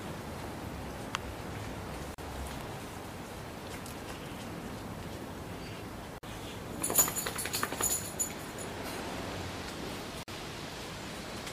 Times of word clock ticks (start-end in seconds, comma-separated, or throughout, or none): none